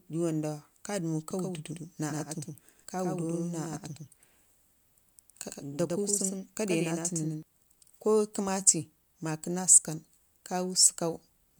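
From 1.31 s to 7.43 s the speech carries a doubled audio track: a second full-band copy trailing about a tenth of a second behind, some 5 dB quieter, with no decay or room colour. It likely comes from a slower capture path. A waveform shows a shifted shadow of every onset, and the copy starts and stops abruptly.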